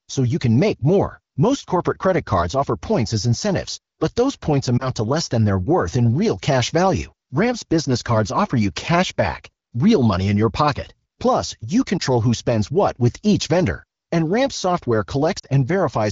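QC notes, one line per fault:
4.78 s, 11.97 s, 15.39 s: lost AMR speech frames. The AMR-WB decoder, whose clean wideband sound suggests a higher rate around 15.85 kbit/s, fills each corrupted gap by repeating the last good pitch and vocal-tract settings at reduced gain. The first two sound like a brief dip or warble, each consistent with a single 20 ms frame. The last is a slightly longer fade to near silence, consistent with about 40 ms, after which the speech returns weak or rough for a moment.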